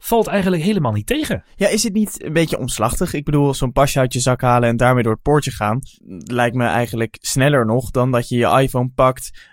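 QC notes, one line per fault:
No faults heard anywhere in the speech.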